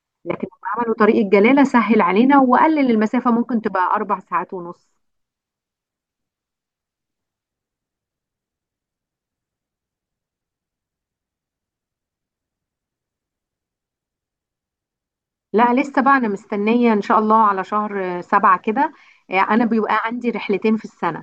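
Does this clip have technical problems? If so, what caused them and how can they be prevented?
No, no technical faults are audible.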